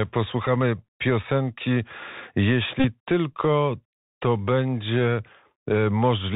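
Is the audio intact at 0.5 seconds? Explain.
No. At 0.5 seconds the audio is not intact. A Bluetooth headset packet repeat has only just ended, running from about 0.46 to 0.48 s. About 11 ms of audio went missing, which fits three lost 3.75 ms packets. The headset chip replayed the previous packet in their place. That repetition every 3.75 ms produces a brief buzz near 267 Hz instead of the real speech. On a waveform it shows as a short stretch of copied, identical cycles. On a spectrogram it shows as a thin vertical strip with evenly spaced harmonic lines at 267 Hz intervals.

Underneath, the whole speech clip is carried through the Bluetooth CVSD headset codec. The damage is plainly audible, which fits a 64 kbps CVSD link. The codec encodes one bit per sample, meaning only up or down, with an adapting step. So nothing above 4 kHz survives, s sounds turn scratchy, loud bright passages distort where the step cannot keep up, and a granular hiss sits beneath everything. 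A spectrogram is empty above 4 kHz with a speckled noise floor. The waveform shows staircase ramps where the signal outruns the step.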